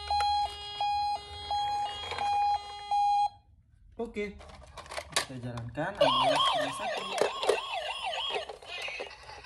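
No technical faults are audible anywhere in this recording.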